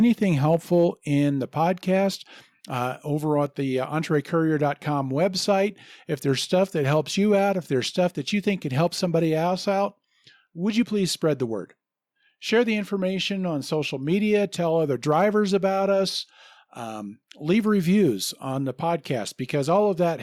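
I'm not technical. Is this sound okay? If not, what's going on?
Yes, it sounds fine: nothing stood out as a problem when I listened to this recording.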